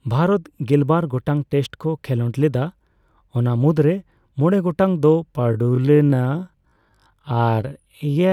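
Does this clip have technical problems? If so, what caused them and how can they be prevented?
Yes. From 5.33 s to the end, a time-stretched section slows the speech to 0.52 times its pace, likely because software lengthened it while holding pitch by repeating short pieces. It drags, and on a spectrogram the harmonic spacing stays fixed while the sound stretches horizontally. Fit timing by editing or re-recording instead of stretching speech this far.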